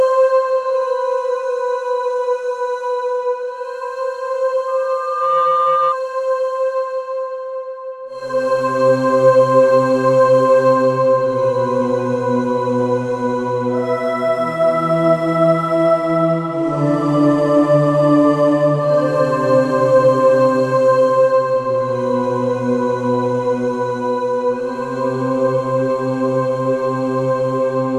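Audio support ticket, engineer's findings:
Loudspeaker feedback squeal, 4.67 to 5.95 s. Mic is picking up its own loudspeaker, with loop gain above unity at 1.2 kHz. A single tone swells in under a second to about programme level.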